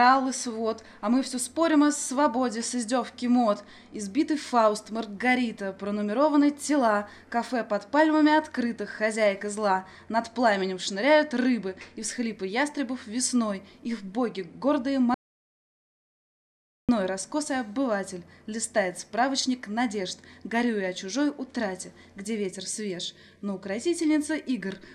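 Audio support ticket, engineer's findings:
Audio dropout to silence, 15.14–16.89 s. Input path lost, likely a disconnected device, failed link or stray mute, while the recorder kept writing silence. Sound cuts off abruptly, roughly 1.74 s of silence with no room tone, then resumes mid-flow. Content in the gap unrecoverable.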